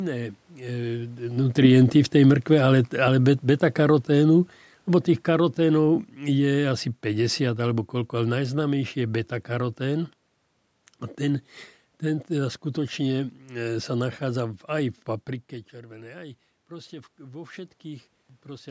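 Automatic gain falling runs from 1.31 to 9.29 s. After the talker shifts position near 1 s, the gain control judges the input too loud and gradually pulls its gain down by about 12 dB, so the speech and the room noise behind it sink together over eight seconds.

Automatic gain rising begins at 15.72 s, just after "nachádza aj v paprike", and lasts until 18.66 s. The talker's move around 15 s drops the input by about 16 dB, and the control slowly adds back about 5 dB, so voice and background swell together.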